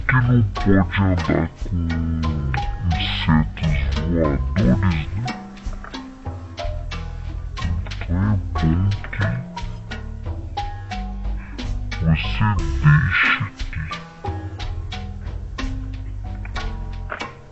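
From start to finish the whole clip runs at half speed and sits a full octave, 12 semitones, low. That's the wrong sample rate: the audio is played back with no conversion, which fits 44.1 kHz material clocked out at about 22 kHz, so everything drags heavily.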